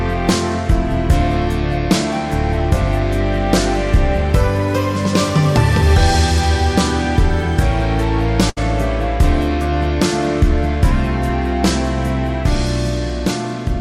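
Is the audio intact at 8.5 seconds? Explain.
No. A burst of packet loss runs from 8.49 to 8.59 s. Several consecutive packets never arrived in time, so the receiver stretched the last received sound across about 71 ms, fading it down, then resumed with roughly 80 ms of audio skipped.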